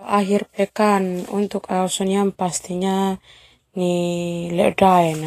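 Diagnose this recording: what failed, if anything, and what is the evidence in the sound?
The codec stage is the culprit here, and the damage runs through the whole speech clip. The top end sounds hissy and grainy, sibilants turn to a rough wash, and consonant onsets come out smeared. That's the signature of Vorbis compression at a low bitrate, likely somewhere around 33 kbps. The encoder spends its few bits on the smooth spectral envelope and quantises the high-frequency detail so coarsely that it turns into noise of roughly the same energy.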